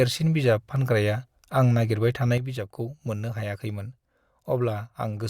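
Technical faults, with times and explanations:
2.38–5.30 s, sudden gain jump: from 2.38 s to the end, speech and background noise fall together by about 7 dB, likely a gain change applied instantly without a ramp. The waveform envelope steps down abruptly, and the spectrogram dims evenly across all frequencies.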